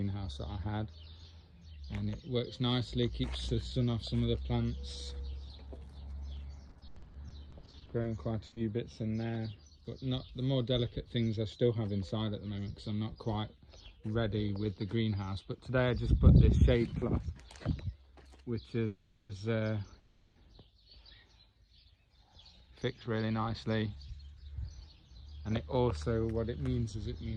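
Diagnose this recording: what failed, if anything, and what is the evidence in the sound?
The network repeatedly lost or delayed packets from 6.69 to 8.06 s, producing repeated packet loss (robotic sound). The receiver patched each hole by extending the previous sound, so about a third of this stretch is synthetic fill. Gaps of up to 90 ms leave the audio choppy, with pieces missing.

At 8.46 s, a burst of packet loss on the network dropped 60 ms of audio. Concealment carried the last sound forward and faded it, so a short held buzz or fading hiss stands in for the lost portion. The audio then resumes further on.

Immediately after, at 8.54 s, another short concealed packet loss on the network removed 20 ms. The decoder filled it from the preceding sound and blended back in, which is heard as a brief smear or wobble.

At 18.86 s and again at 19.99 s, the audio stalls into a fading buzz or hiss for 0.43 s and 0.36 s, then continues from where it stopped, with nothing lost. 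This is a call audio freeze, likely caused by packets held up in the network so that the jitter buffer ran empty. Each stall adds its own length to the delay.

From 22.09 to 24.18 s, a jitter buffer speed-up in the receiver's buffer stage removed about 0.3 s of audio, cut out a pitch period or so at a time. The audio plays at 114% speed with unchanged pitch and sounds hurried.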